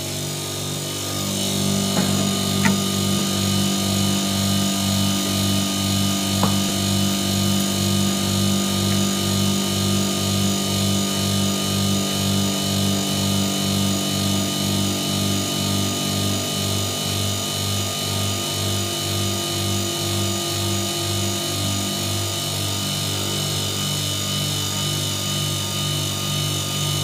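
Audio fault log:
3.19 s and 6.69 s: repeated buffer. Fresh audio reached the output late, so the device replayed its last block of about 11.6 ms once, which fits a 512-sample buffer. Each hard join is heard as a brief click in the sound, and about 10 ms of audio goes missing.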